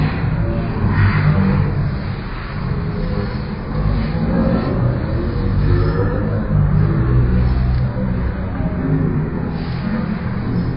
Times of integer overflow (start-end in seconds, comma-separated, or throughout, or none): none